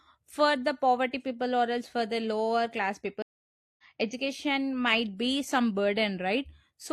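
At 3.22 s there's a stream reconnect: about 0.56 s of silence, then the speech picks up roughly a third of a second further on, easing back in.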